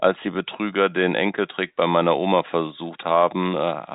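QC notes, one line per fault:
No faults: the speech sits in an ordinary G.711 telephone channel, with nothing above about 3.8 kHz and at most a faint trace of the coding's level-following quantisation noise.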